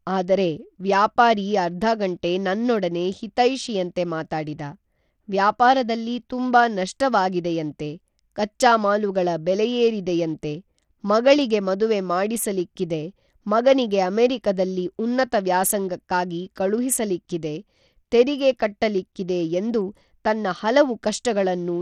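From start to finish the speech carries plainly audible Bluetooth SBC compression damage, likely from a link running a small bit pool, which fits a low bitrate around 80 kbps. With so few bits, the upper sub-bands are starved and the rest coarsely quantised. The treble flickers in and out, and a gritty grain with aliasing rides on the sound. On a spectrogram the top band breaks into patchy, blocky gaps with stray energy mirrored below.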